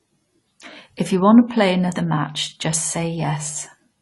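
From start to finish, the speech sounds dull and smeared. Nothing is heard above about 11.4 kHz. The codec damage is plainly audible. Sibilants turn fizzy, and held sounds carry a warble. The likely cause is AAC compression at a low bitrate, which fits AAC-LC near 32 kbps. At that rate the encoder cannot keep every frequency line. It lowers the top cut-off and quantises coarsely, so detail drops out and leaves this hollow, watery texture.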